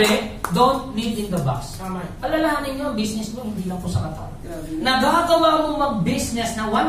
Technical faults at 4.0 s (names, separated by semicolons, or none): none